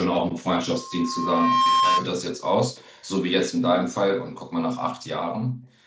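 Loudspeaker feedback squeal, 0.72 to 2.08 s: a microphone is picking up the loudspeaker it feeds, and at 1.1 kHz the loop gain tops one. That single tone swells over roughly a second until it sits about 5 dB above the speech, then stops.

Echo leak, 2.76 to 3.09 s: a very faint delayed copy of the speech trails it by 111 ms. This is likely the far side's loudspeaker sound getting past its echo canceller and being sent back.

Background gated by the echo canceller, 5.48 to 5.67 s: while the far loudspeaker played, the canceller clamped the microphone, so the room sound dips by up to about 17 dB for about 200 ms before recovering.

The echo leak returns at 5.69 to 5.76 s, an even fainter 111 ms-delayed scrap.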